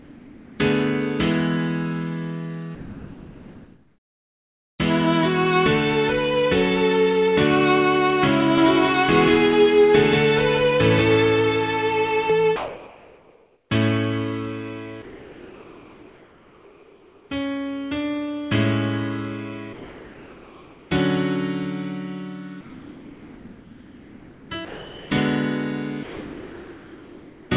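From 0.0 to 0.59 s and from 2.75 to 4.79 s, the pauses carry comfort noise in place of the background: the real background gives way to a steady, featureless hiss, about 3 dB quieter, most likely because discontinuous transmission halted sending and the receiver synthesised filler.

From 8.58 to 12.30 s, a doubled audio track runs. A second full-band copy, roughly as loud as the original, trails it by about a fifth of a second and starts and stops abruptly. It is likely a second capture path or a misaligned edit.

The same comfort noise returns at 12.56–13.70 s (about 2 dB louder than the real background), 15.02–17.30 s (about 2 dB quieter), 19.73–20.90 s (about 2 dB quieter) and 22.61–24.50 s (about 3 dB quieter).

At 24.65–25.10 s and 26.03–27.50 s, sound is dropped by the voice detector. The detector likely misjudged quiet sound as background, so about 0.37 s and 0.83 s of material are replaced by steady noise until transmission resumes. 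Throughout, nothing reaches above 4 kHz, as expected from the G.711 call path.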